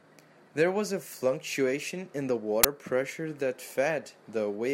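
A sudden, loud crack cuts through the speech at 2.64 s. This uninitialised buffer fault played leftover memory as samples, lasting about 11 ms, which fits a 512-sample buffer.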